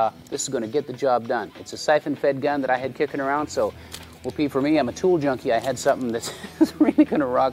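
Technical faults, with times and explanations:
No technical faults can be heard anywhere in the recording.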